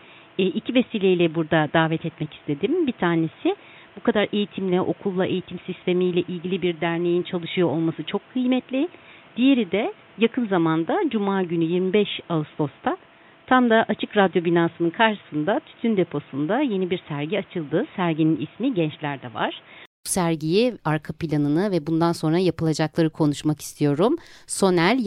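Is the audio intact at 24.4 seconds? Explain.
Yes, at 24.4 seconds the speech plays through intact, with no audible fault.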